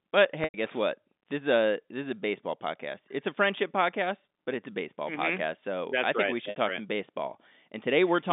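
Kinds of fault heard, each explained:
Packet loss with pitch repetition: a brief held, buzzy tone that fades toward silence, about 100 ms at 0.44 s and 60 ms at 6.5 s. The receiver bridges the missing audio by repeating the last pitch period, then cross-fades back into the real signal.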